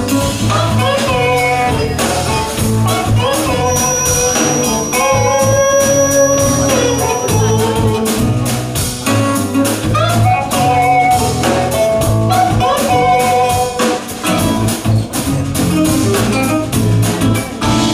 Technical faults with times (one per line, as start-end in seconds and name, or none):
3.59-7.67 feedback whistle